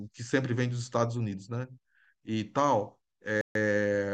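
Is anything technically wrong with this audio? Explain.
Yes. From 3.41 to 3.55 s the speech drops to 140 ms of silence, then resumes: a Bluetooth stall, likely the headphone buffer running dry while delayed packets were resent.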